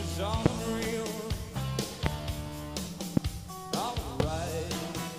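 Four loud pops occur at 0.46, 2.06, 3.17 and 4.20 s. Each is a sharp 25 ms transient, roughly 25 dB above the surrounding sound, which carries on underneath. Each is likely a brief voltage spike from a switch, connector or static discharge.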